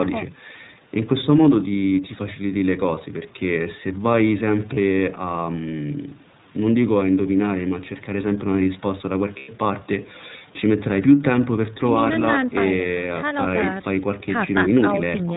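The speech has passed through the iLBC codec, a narrowband VoIP coder that encodes each 30 ms frame's excitation independently of the one before. Its character fits the 13.33 kbps, 30 ms mode. Everything above 4 kHz is gone, so sibilants and consonant edges sound dull and boxy. The codec damage is plainly audible throughout as a slightly rough, synthetic grain on the voice. The call microphone processing trims the lowest bass, which is normal and not a fault.

There are two episodes of lost iLBC frames. Packets went missing, and the decoder filled each gap by repeating the last pitch cycle blended with noise. From 4.74 to 4.78 s, a gap that fits a single 30 ms frame, there is a brief held, buzzy smear. From 9.39 to 9.49 s the concealment stretches across about 90 ms, consistent with three consecutive lost frames. There the sustained breathy vowel is longer and fades. Because iLBC frames stand alone, the voice snaps back cleanly right after each gap.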